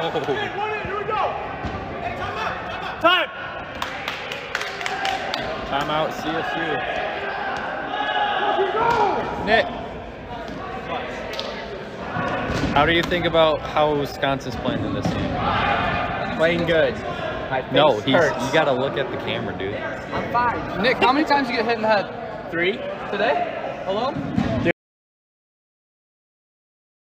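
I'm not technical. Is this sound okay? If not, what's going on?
No. Near the end, the recording most likely lost its input, perhaps from a loose connection or an accidental mute, while the recorder kept running and saved pure silence. This is an audio dropout to silence. At 24.71 seconds the sound stops abruptly, mid-flow, and from there to the end of the clip there is nothing at all, not even faint background noise. Whatever happened in those last seconds wasn't captured and can't be recovered.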